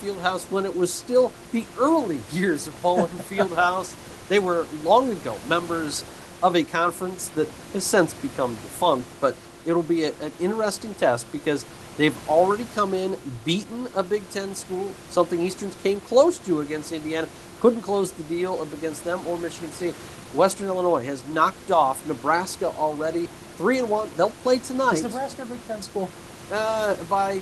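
The speech carries no technical faults; a room background sits about 17 dB below it, and the call path's coding leaves the band topping out around 12 kHz, as expected of a compact speech codec.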